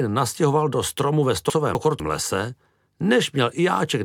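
From 1.5 to 2.0 s, chunks play out of order. Two 250 ms chunks are swapped: the first arrives one chunk late and plays after the one meant to follow it. No audio is lost. The passage sounds jumbled, with three hard joins.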